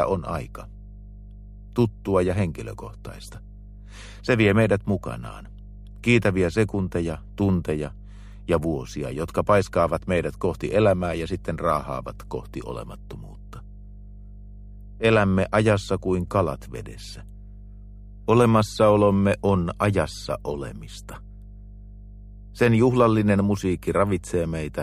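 Mains hum runs throughout: a steady 50 Hz tone with low harmonics, roughly 20 dB below the signal, from power-line leakage through a ground loop or nearby transformer.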